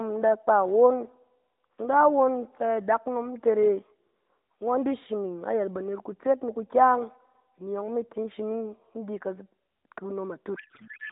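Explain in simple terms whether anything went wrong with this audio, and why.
Something goes wrong right at the end. From about 10.55 s until the clip stops at 11.12 s, the speech turns into garbled noise and warble that barely follows the talker. This is a codec payload misread. The phone codec packs speech into small blocks of bits. Here the two ends disagree on how those bits are laid out. The receiver reads each block with its parts in the wrong places. Before that point, the speech carries the narrow, phone-like sound of the mobile codec.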